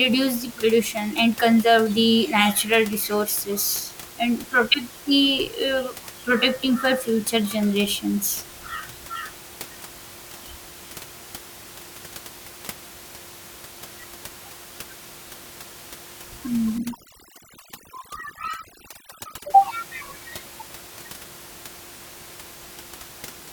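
From 16.78 to 19.50 s, overdone noise removal clamps bands near its noise estimate, so the room noise, otherwise about 19 dB below the speech, collapses to near silence with twinkling specks and quiet vocal detail vanishes. Unlike codec artefacts, the damage tracks the noise floor.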